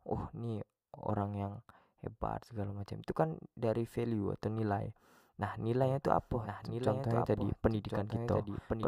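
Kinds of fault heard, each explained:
Doubled audio track: from about 5.83 s to the end, a second copy of the speech runs roughly a second behind the first, a few dB quieter, with no reverb tail. It starts abruptly, likely a slower capture path or an edit leaving two copies out of step.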